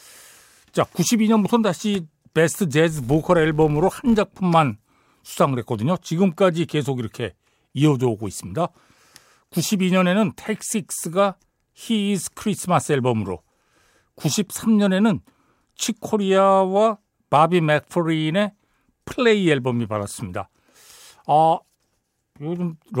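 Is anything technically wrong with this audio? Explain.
Yes. From 2.90 to 4.40 s the speech carries a regular ticking that merges into an 86 Hz buzz, louder where the speech is louder. This is a filter restarted on every block: its state resets each time, so every block opens with a small transient, at a rate that fits 512-sample blocks.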